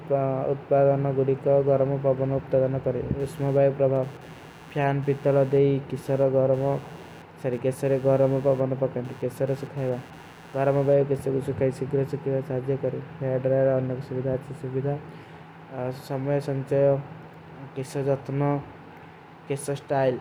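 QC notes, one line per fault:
3.2 to 11.2 s, computer activity noise: there's a buzzy, chirpy pulsing around 100 Hz sitting roughly 30 dB under the speech, and it tracks nothing the talker is doing. That's the giveaway. The machine's processor or graphics load is shifting, dragging the shared ground of the audio circuit around with it, so its activity leaks straight into the signal and the buzz stops once the load settles.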